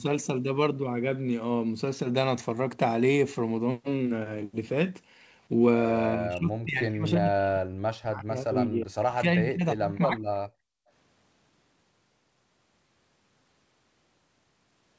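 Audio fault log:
6.15 to 10.21 s, speech suppressed in double talk: both ends of the call were likely talking at once, leaving the echo canceller unable to tell the near talker apart from the loudspeaker echo, so it pulled down everything it heard. For around four seconds the speech sinks, thins and breaks up in fragments, falling by roughly 40 dB at its deepest, as the canceller clamps the microphone signal while the far side is active.
10.49 to 10.91 s, background gated by the echo canceller: with the loudspeaker still playing, the canceller shut the microphone down hard instead of subtracting only the echo. The room tone drops by about 40 dB for roughly 0.4 s, leaving a brief hole of near silence, then returns as soon as the canceller releases its hold.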